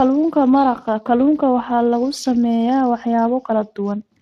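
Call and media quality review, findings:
Speech hoarse and grainy throughout, with plainly audible coding damage and nothing above 15.4 kHz. Speex codec, near 22 kbps by the sound. The CELP excitation is short of bits, and the band above 8 kHz is only a shaped noise fill.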